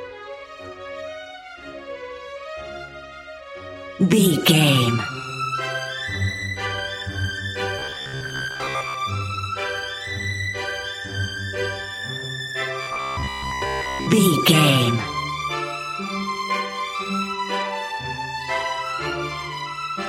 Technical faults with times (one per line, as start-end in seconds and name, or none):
7.79-8.94 robotic sound from repeated short buffers
12.82-14.08 robotic sound from repeated short buffers